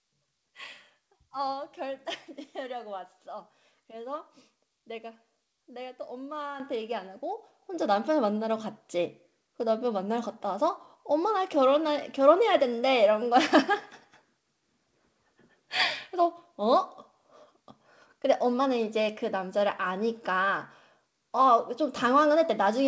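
Microphone volume stepped up at 6.6 s and again at 7.62 s in this speech clip: the call software judged the input too quiet and raised the device gain in single jumps of about 9 dB, then about 7 dB, lifting voice and background together. Nothing is audible above 8 kHz, consistent with a wideband call codec such as G.722.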